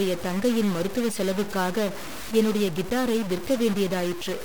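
A stuck bit runs through the whole clip: the speech carries a harsh, buzzy distortion, and the pauses are filled with a steady noise floor at about -30 dBFS. This likely comes from one converter or data line held fixed, pushing about half the samples off by that bit's weight.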